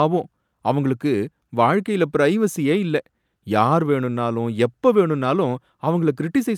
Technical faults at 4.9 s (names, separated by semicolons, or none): none